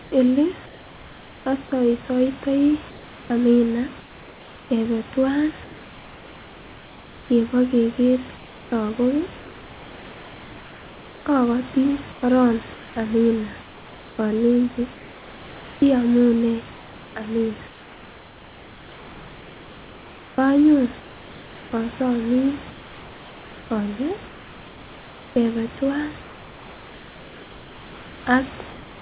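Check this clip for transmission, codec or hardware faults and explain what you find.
One fault recurs in the pauses, heard over a call path with nothing above 4 kHz, which fits a narrowband G.711 call.

Comfort noise in place of the background occurs at 0.02–1.46, 2.9–4.7, 5.64–7.3, 8.36–11.26, 12.12–15.82, 16.74–21.72, 22.7–25.36 and 26.22–28.26 s. The likely cause is that the sender stopped transmitting during silence and the receiver filled the gap with synthetic noise. The room noise between phrases becomes a steady, featureless hiss, about 2 dB quieter at 5.64 and 26.22 s.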